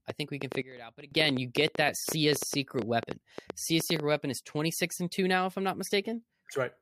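From 0.10 s to 4.01 s a train of clicks runs over the speech, about 8.2 per second at an uneven pace, some thirty in all, each peaking roughly 10 dB above the speech. The clicks share the same sharp shape and tick through pauses as well as words, which separates them from mouth clicks or plosives tied to the talker. The likely source is interference from nearby equipment or a faulty connection or power supply.

At 0.62 s a sudden gain jump cuts the level by about 19 dB, and at 1.12 s it returns just as abruptly. Speech and background noise fall and recover together, in a single step with no ramp, which marks a digital gain change applied instantly, likely a setting or bit shift. A fade or compressor would ease the level down instead, and a dropout would silence the noise floor rather than lowering it with the speech.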